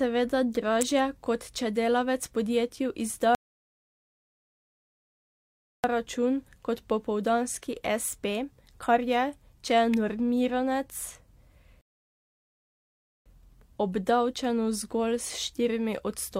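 At 0.81 s a sharp snap cuts across the speech, an electrical switching spike, likely from a nearby switch, motor or static discharge arcing and being picked up by the audio line. On a waveform it is a near-vertical needle standing above the speech envelope; on a spectrogram, a thin full-height vertical stripe. A second, even briefer snap of the same kind lands at 9.94 s.

From 3.35 s to 5.84 s the speech drops to dead silence and then carries on exactly where it broke off. This is a rebuffering stall: playback ran dry of downloaded audio and waited for more, inserting about 2.49 s without losing anything. The waveform shows a flat line with clean edges, and the spectrogram shows a blank band. A shorter stall follows from 11.81 s to 13.26 s, adding about 1.44 s.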